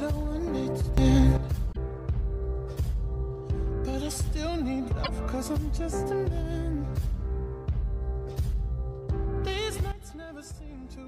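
At 0.98 s a sudden gain jump lifts the level by about 11 dB until 1.37 s, likely from an unramped gain setting, with the background jumping too. Damaged data in the compressed stream causes brief glitches at 1.69–1.77 s and 5.00–5.09 s as the decoder loses sync. From 9.92 s to the end, a second sudden gain jump drops everything by about 12 dB.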